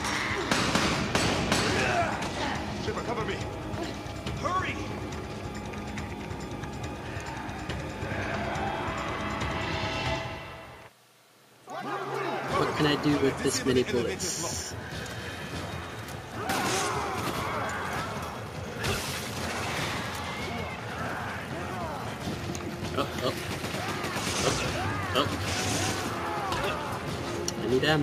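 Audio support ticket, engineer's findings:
Nothing stood out on listening, so there is no symptom to trace to a component in this ticket.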